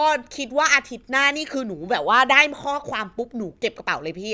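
Nothing goes wrong anywhere in this bit of speech; there's no dropout, glitch or other technical hiccup to point to at any moment.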